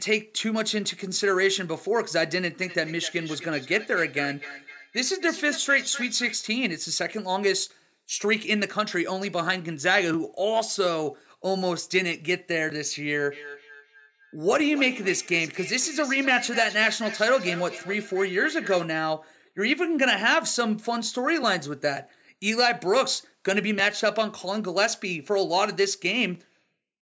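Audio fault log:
2.6–6.49 s and 13.32–18.89 s: feedback echo between two devices. The speech returns roughly every 300 ms, up to about 13 dB below the direct sound. A second device replays this microphone's signal, which is picked up again, and the local echo canceller cannot remove it.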